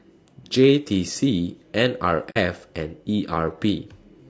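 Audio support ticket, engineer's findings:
Rough, grainy speech throughout, noise filling the gaps between harmonics and a thin, synthetic-sounding top band. Likely low-delay AAC compression (AAC-ELD). The short frames resolve pitch harmonics poorly, and the plainly audible damage suggests a starved bitrate around 32 kbps. Spectrogram: smeared, blurred harmonic lines, hiss between them, upper band patchy.

Soft-edged dropout at 2.30 to 2.38 s, fading out and back in. AAC frame loss with muting: the decoder zeroed the missing spectra, and the overlapping windows tapered the edges. The roughly 0.08 s hole fits two lost frames. Waveform: envelope ramps smoothly to silence and back. Spectrogram: a clean vertical gap across all frequencies.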